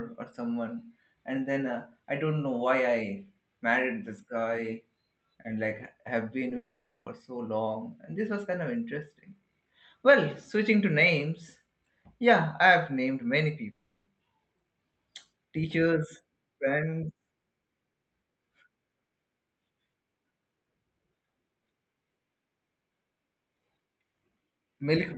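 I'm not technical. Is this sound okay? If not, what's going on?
No. At 6.49 s, just after "like have", a tiny piece of the call, about a hundredth of a second, arrived too late. The receiver patched it by stretching the sound around it. This short concealed packet loss is heard as a quick smear or wobble.

From 6.56 to 7.07 s and again from 13.71 to 14.08 s, the sound turns into a fading buzz or hiss, then a brief silence, and resumes with a piece missing. This is likely a long network dropout, where the connection stalled and the receiver filled the gap with guesswork.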